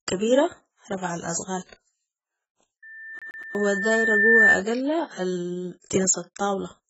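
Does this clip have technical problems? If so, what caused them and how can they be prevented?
Yes. The whole clip sounds dull and smeared, with a fizzy, warbling texture on sibilants and nothing above about 7.7 kHz. That's likely AAC compression at a very low bitrate, around 12 kbps, where the encoder drops high bands and quantises coarsely. Encoding at a higher bitrate avoids it.

From 2.82 to 4.62 s there's a loudspeaker feedback squeal at 1.8 kHz. It swells over roughly a second and a half to about 10 dB above the speech, because the mic is picking up its own speaker and looping. Keeping mics out of speaker coverage, turning the gain down or notching 1.8 kHz prevents it.

Between 3.19 and 3.55 s the audio stutters like a CD stuck on one turn, with a 120 ms chunk played three times and a short mute at each jump, the laser jumping back a track at a scratch. Cleaning or replacing the disc, or ripping with error correction, stops it.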